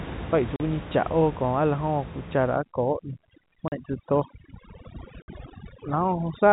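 A speech recording over telephone coding that stops at 4 kHz, with room noise about 13 dB below the voice. It has packet loss filled with silence at 0.56 s (40 ms), 3.68 s (40 ms) and 5.22 s (60 ms). Each gap is a multiple of 20 ms, which fits 20 ms packets. On the waveform these are flat silent stretches with abrupt edges. On a spectrogram they show as blank vertical stripes. From 2.56 s to the end, overdone noise removal pushes the background down and breaks it up into twinkling specks. The spectrogram shows scattered isolated dots where the noise floor was, and weaker voice detail has been carved away.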